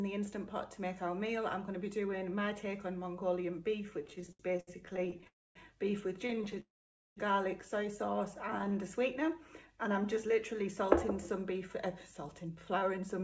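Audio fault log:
4.02–5.27 s, 6.27–6.58 s and 8.59–8.79 s, repeated stalls (stutter): the sound keeps catching and dragging, with about a quarter of each stretch patched over. Packets are arriving late, so the buffer keeps running dry and the receiver stretches the last bit of sound. The longest hole is about 68 ms, in the first run.
5.27–5.57 s and 6.60–7.18 s, call audio freeze: the sound hangs as a fading buzz or hiss, then drops to silence for about 0.24 s and 0.51 s, and picks up where it stopped. The likely cause is packets held up long enough to empty the jitter buffer, which adds roughly 0.28 s and 0.56 s of delay.
9.67–10.64 s, jitter buffer slow-down: the audio runs at about 94% speed with the pitch unchanged, so things sound slightly drawn out. The receiver repeats single pitch periods, adding about 62 ms in total, to rebuild a reserve in a low buffer.
12.27–13.20 s, jitter buffer speed-up: the audio runs at about 106% speed with the pitch unchanged, so it sounds a bit hurried. 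Roughly 70 ms of short pitch-period slices get cut out to drain the excess audio sitting in the buffer.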